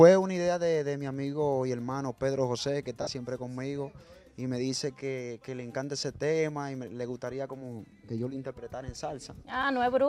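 At 3.02 s a run of lost LE Audio frames hits for about 50 ms, which points to five 10 ms frames going missing. The LC3 decoder papers over it by replaying the last spectrum with scrambled signs, so the sound smears into noise, then fades. A single dropped frame at 6.02 s gives a quicker blip, with light lossy compression applied throughout.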